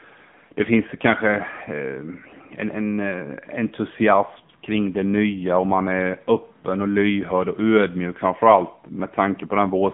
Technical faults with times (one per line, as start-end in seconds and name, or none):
0.00-9.94 AMR narrowband mobile codec